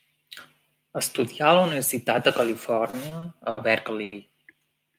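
Speech, with two jitter-buffer faults. From 2.90 to 3.59 s there are repeated stalls (stutter). Packets reached the receiver late or more slowly than they were played, so the jitter buffer ran dry four times. Each gap was covered by extending the preceding sound, about 150 ms of filler in total, with the longest single hold at 70 ms. Roughly a fifth of that stretch is concealment rather than real signal. Nothing is actually lost, but the speech drags and catches unevenly. At 4.03 to 4.14 s comes a short stall from a late packet. One packet arrived about 90 ms after it was due. The receiver held the last sound for those 90 ms and then resumed from the same point, so one sound is sustained too long, with a slight buzz or dip, before normal playback returns.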